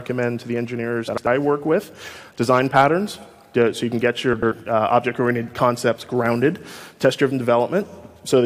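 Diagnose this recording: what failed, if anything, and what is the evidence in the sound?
Frames out of order, at the network or packet-delivery stage ahead of the codec: the sound from 1.07 to 1.27 s and from 4.33 to 4.53 s flutters. Two adjacent blocks of about 93 ms each play swapped, which fits four-frame runs of roughly 23 ms frames.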